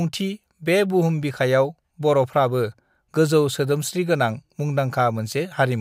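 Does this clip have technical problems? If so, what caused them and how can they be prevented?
No, nothing technical goes wrong anywhere in this speech recording, so there's nothing here to fix or guard against.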